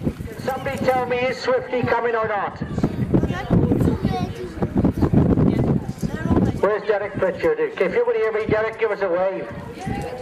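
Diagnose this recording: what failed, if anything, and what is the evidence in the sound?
Nothing in the recording points to a failure at any stage, so there's nothing here to diagnose.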